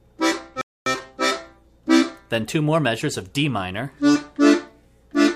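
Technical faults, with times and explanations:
0.61–0.86 s, playback stall: the sound cuts out abruptly into silence for about 250 ms, then picks up again. A dropout of this length most likely means the player ran short of buffered data or its output thread was briefly blocked.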